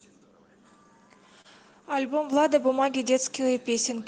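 At 1.41 s the speech briefly hangs: a short stall from a late packet. The packet carrying the next stretch of audio had not arrived on time, so the jitter buffer emptied and the receiver sustained the last sound for 32 ms to cover the gap, then resumed exactly where it left off. Nothing is lost, but the held sound is audibly drawn out, with a faint buzzy or dipped quality, and everything after it runs 32 ms later.

At 2.33 s the level rises abruptly: the microphone volume stepped up. The call software judged the input too quiet and raised the device's capture volume in a single move of about 5 dB. Because the change happens before any processing, the speech and the background noise jump together, so the room sound becomes noticeably louder along with the speech from that point on.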